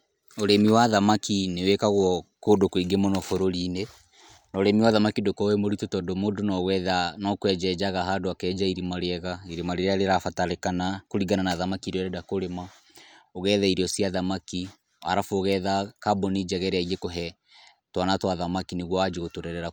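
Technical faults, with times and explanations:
Nothing in this speech recording stood out as a technical problem on listening.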